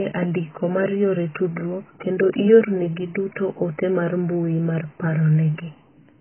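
A very low bitrate, likely from heavy AAC compression, forces the coder to discard most high-frequency detail for the whole clip. The speech has nothing above 3.1 kHz, sounds dull and smeared, and carries a warbling, fizzy texture that fits roughly 12 kbps.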